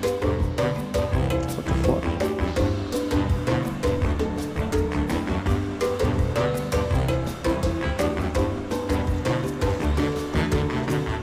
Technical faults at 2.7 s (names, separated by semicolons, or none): none